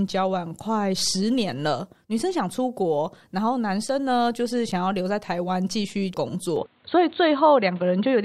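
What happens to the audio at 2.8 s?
Nothing goes wrong at 2.8 s; the speech runs through that moment intact, with no dropout, click or distortion.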